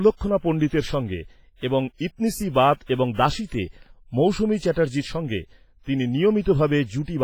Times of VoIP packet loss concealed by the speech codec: none

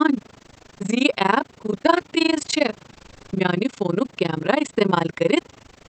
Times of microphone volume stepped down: none

